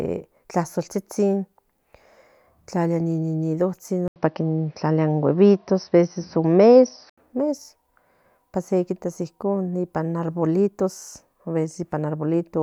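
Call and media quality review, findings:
Speech dull, nothing above 5.9 kHz, 4.08–7.18 s; 80 ms gap at switch, about 5 dB level shift. Likely input switched to a poorer device with a narrower band.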